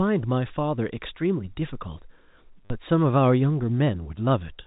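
From 2.65 to 2.70 s, packet loss with the last packet repeated fills a 50 ms gap. The previous packet replays, which fits five 10 ms packets, so the narrowband G.711 telephone sound stutters robotically. Unlike a dropout, it never falls silent.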